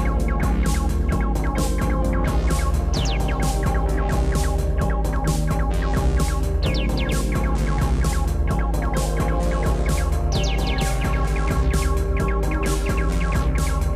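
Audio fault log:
No faults were found in this audio. Nothing in the clip calls for a timed entry.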